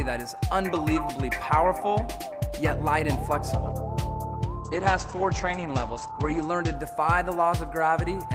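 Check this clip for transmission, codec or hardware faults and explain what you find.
One transmission fault is present: a call bitrate drop from 4.63 s to 6.81 s. The call's bandwidth estimate fell, so the encoder was allowed far fewer bits and coded the sound more coarsely. The audio bandwidth shrinks from 20 kHz to 8 kHz, and the lowest quality holds for about 1.8 s. The character of the sound fits a fall from roughly 32 kbps to about 12 kbps. During this stretch the sound turns muffled and rough, then recovers.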